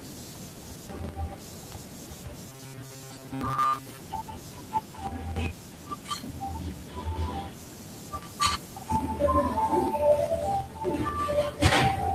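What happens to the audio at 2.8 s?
At 2.8 s the speech falls inside a stretch of robotic sound from repeated short buffers, from 2.49 to 4.0 s. The likely cause is audio arriving too seldom, so roughly 7.5 ms snippets are looped in place of most of the real signal. That forces a rigid, metallic 133 Hz buzz that still loosely tracks the words, with no silent gaps as in a dropout.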